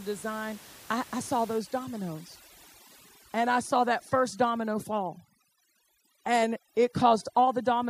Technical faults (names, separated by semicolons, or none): overdone noise removal